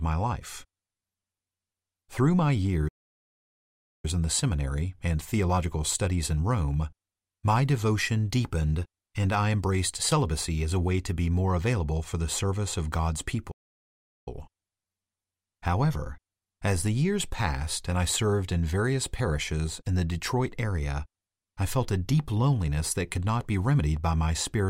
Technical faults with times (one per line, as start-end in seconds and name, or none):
2.88-4.05 playback stall
13.51-14.28 playback stall